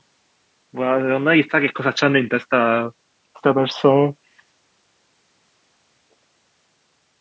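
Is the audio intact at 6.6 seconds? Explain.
Yes, the speech at 6.6 seconds is intact, with nothing there beyond the ordinary call microphone processing that trims the lowest bass and leaves nothing above 8 kHz.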